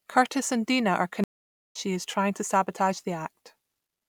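At 1.24 s the speech drops into a stream reconnect: the connection failed, the player fell silent for about 0.51 s, then re-established the link and started a new decoder partway through the stream. When sound returns at 1.76 s it does not pick up where it stopped but roughly 0.7 s further on, so a short stretch of speech is missing across the gap, as happens when a live feed continues during the outage.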